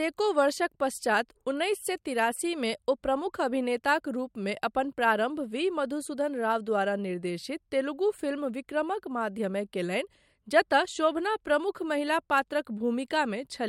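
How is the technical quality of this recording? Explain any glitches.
The speech recording has no technical glitches, and its signal stays continuous and intact throughout.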